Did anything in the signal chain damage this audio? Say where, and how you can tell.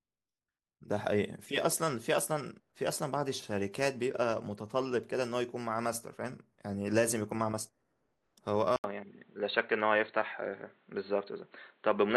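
Yes. At 8.76 s the audio cuts out for about 80 ms, then returns to the end duller and boxier, with nothing above 4.3 kHz, a level shift of roughly 5 dB, and a new, fairly low background noise floor. That points to the capture stage: the input likely switched to a poorer device, such as another microphone or a headset's call profile, whose narrower band, different gain and own noise replaced the original path.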